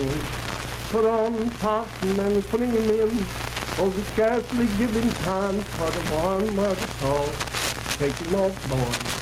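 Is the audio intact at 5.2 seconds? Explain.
No, 5.2 seconds sits inside gain pumping that runs through the whole clip. The gain swings around 10 dB, so loud and soft parts end up closer in level and the sound is squashed. That's likely input gain set far too high, with a fast limiter clamping down.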